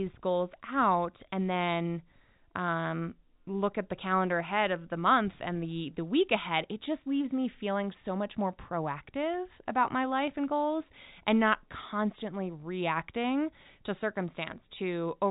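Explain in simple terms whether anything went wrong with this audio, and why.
Nothing went wrong with this speech audio, because no fault can be heard anywhere in it.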